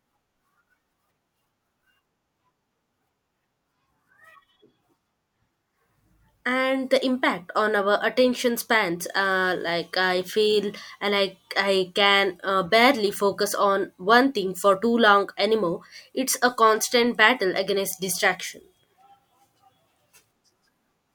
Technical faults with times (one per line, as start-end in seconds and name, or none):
none